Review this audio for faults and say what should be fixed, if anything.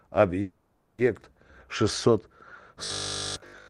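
A call audio freeze runs from 0.41 to 1.00 s. The last sound is stretched into a fading buzz that ends in about 130 ms of silence. The speech then resumes where it stopped, with nothing lost but 570 ms late. This is likely caused by packets held up in transit, which emptied the jitter buffer. A larger, adaptive jitter buffer and prioritised network handling of the call traffic would prevent it.

From 2.84 s to the end of the clip there is robotic sound from repeated short buffers. Nearly all of the real speech is replaced by loops of short segments, which imposes a rigid, metallic 50 Hz buzz. That rate fits a 20 ms buffer being replayed, likely because new audio arrived too seldom. Feeding audio to the output on a steady schedule, so the buffer never starves, would prevent it.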